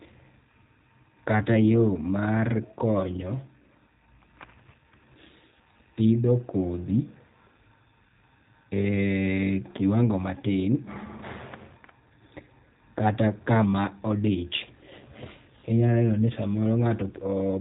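The whole clip carries G.729 codec damage, plainly audible and pointing to the G.729A variant at 8 kbit/s. The speech is rebuilt from a vocal tract filter, pitch prediction and sparse pulses. Nothing above 3.8 kHz survives. The voice sounds muffled, rough and faintly synthetic.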